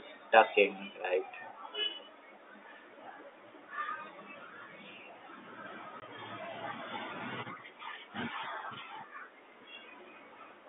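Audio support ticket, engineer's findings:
Packet loss filled with silence, 6.00–6.02 s: a 20 ms gap in the telephone-band speech, which points to one dropped packet. The receiver substituted silence, leaving hard edges.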